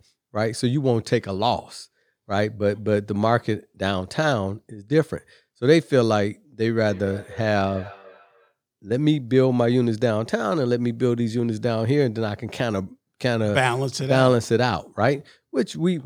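A speech recording with feedback echo between two devices from 6.82 to 8.55 s: a second device on the same call replays this microphone's signal, which is captured again outside the echo canceller's reach, so the speech returns roughly every 300 ms at about -20 dB.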